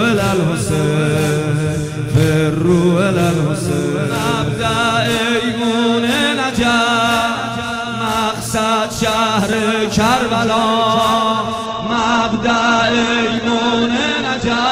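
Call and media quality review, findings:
Dropped samples: four single sharp clicks at 3.69, 6.16, 9.53 and 13.38 s, each a thin vertical line across the spectrum. Likely cause is a fraction of a millisecond skipped in the capture or transport path, so the waveform jumps to a later value. Nothing audible is removed. A dropout or packet loss would leave a gap, and a buffer underrun would repeat or stutter the sound.

Adaptive stream at a lower bitrate: a sudden step down in quality at 11.66 s that lasts to the end, with no gap. More codec artefacts. This fits the player switching from Opus at around 64 kbit/s to around 12 kbit/s. Packet-loss concealment would come in short warbling bursts instead, and the full-band sound before 11.66 s rules out a fixed low-bitrate codec.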